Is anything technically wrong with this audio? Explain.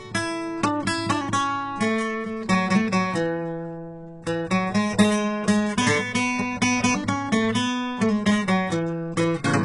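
Yes. Throughout the music, the damage points to heavy HE-AAC compression, likely at a very low rate around 12 kbps. Only the lower spectrum is truly coded, and the treble is synthesised from copied lower bands, so highs sound gritty and metallic, with nothing above 11.1 kHz.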